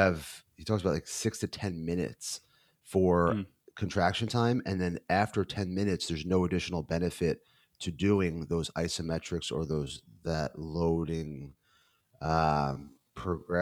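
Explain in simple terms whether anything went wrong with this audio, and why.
From 9.71 s to the end of the clip, right after "doing those isometrics or", there is a time-stretched section: the speech suddenly slows to about 0.58 times its normal pace while the pitch stays the same. Software likely stretched it by repeating short slices of the audio.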